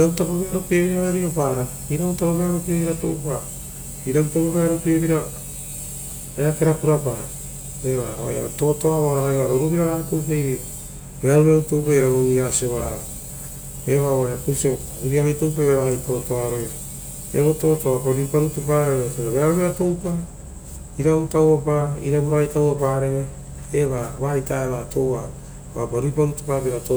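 No technical faults occur at any point in the recording, so there is nothing to describe in time order.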